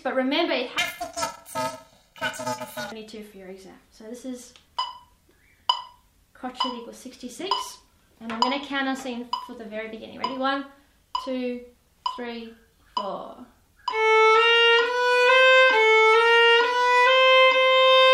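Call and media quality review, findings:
Planar audio read as interleaved, 0.78–2.92 s: robotic buzz at 375 Hz, fitting 128-sample blocks (2.67 ms). Overall pace holds with no octave shift, unlike a sample-rate mismatch.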